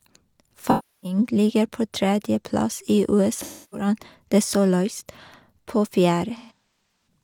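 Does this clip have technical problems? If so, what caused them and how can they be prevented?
Yes. AAC frame loss with concealment occurs at 0.67–1.18 s (before "ligger på tredjeplass i"), 3.40–3.87 s (after it) and 6.36–7.07 s. The decoder refills the gaps from the last good spectrum, which sounds smeared and phasey. A spectrogram shows blurred, stretched bands, and the waveform shows a sagging envelope. Retransmission or error protection on the link would prevent it.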